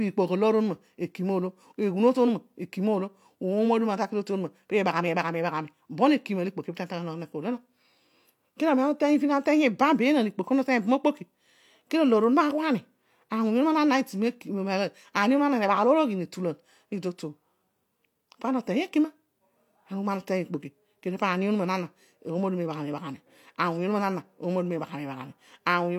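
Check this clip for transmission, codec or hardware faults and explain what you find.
No faults found.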